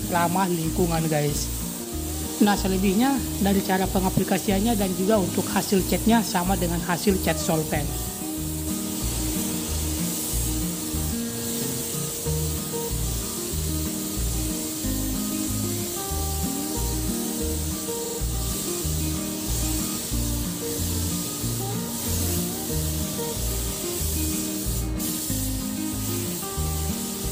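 Repeated frames at 18.04–18.18 s: a 46.4 ms chunk, which fits two compressed frames, plays three extra times, giving a quick stutter and adding 139 ms.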